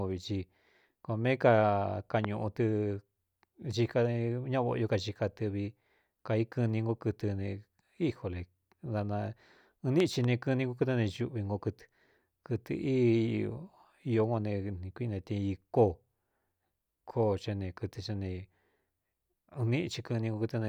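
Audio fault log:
2.24 to 2.27 s, loud pop: a single sharp pop jumps out about 15 dB above the speech, and the talking carries on right underneath it. It's probably a quick voltage spike, likely from a plug, a switch or static, riding on top of the signal.
10.00 to 10.26 s, loud pop: this time it's two pops in quick succession, again about 15 dB over the speech. The same kind of electrical glitch, likely a flaky connection or driver hiccup, fired twice.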